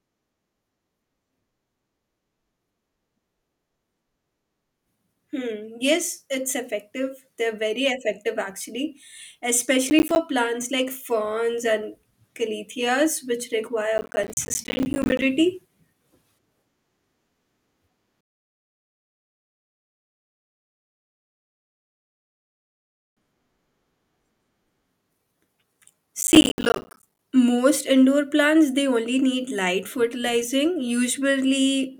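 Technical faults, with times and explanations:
9.9–10.16 s (just before "plants like ferns and"), 13.98–15.22 s and 26.21–27.19 s (just before "most indoor plants they"): processor overload crackle. Runs of missed deadlines on buffers of around 10 ms leave hard-edged silent gaps, heard as gritty tearing. The waveform shows rapid drops to near silence, and the spectrogram shows dense vertical broadband streaks.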